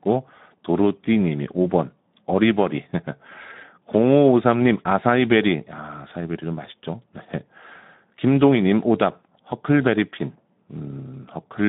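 The clip is speech, and Speex codec damage runs through its whole length. The sound is confined to a telephone-like band from about 150 Hz to 3.7 kHz. Nothing is present above 3.9 kHz. The coding damage is plainly audible as a rough, grainy texture. That comes from a CELP coder with too few bits to model the excitation faithfully. The degree of damage fits a low setting of around 11 kbps.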